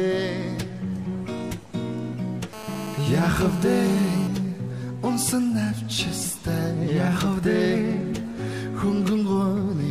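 GSM phone buzz runs from 2.53 to 4.28 s: a nearby 2G phone in a call bursts at 216.7 Hz, rectified into a hard, raspy buzz about 13 dB below the signal. GSM signalling bursts follow from 4.36 to 6.29 s, as the call's talker falls silent, leaving a faint pattern of even ticks with a longer 217 Hz buzz twice a second, roughly 30 dB down.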